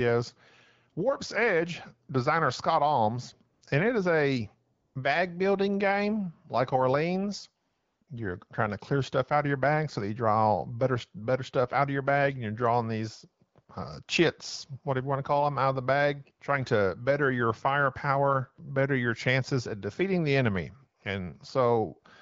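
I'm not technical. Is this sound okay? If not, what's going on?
No. There are four short gaps filled with AMR comfort noise: 3.53 to 3.61 s (just before "and it is a"), 4.73 to 4.95 s (before "bag building game like"), 7.69 to 8.01 s, and 8.03 to 8.07 s. The phone thought nobody was talking and stopped sending sound. The other end filled the gap with a smooth, artificial hiss. You hear the real background briefly switch to that hiss and back.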